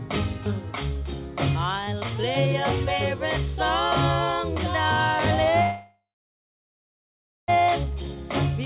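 From 5.62 to 7.5 s the sound stalls in what is most likely a call audio freeze: packets seem to have been held up and the jitter buffer ran dry. The last sound is stretched into a brief fading buzz or hiss, then roughly a second and a half of silence, and the audio resumes exactly where it stopped, about 1.9 s late. Unlike a packet-loss dropout, nothing is skipped. Everything arrives intact but delayed, all within the narrow band that ends at 4 kHz, as G.711 mu-law call audio does.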